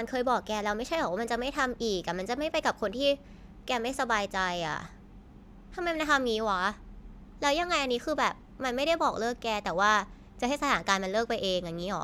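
Nothing technical goes wrong anywhere in this speech recording, so there's no fault to point to here.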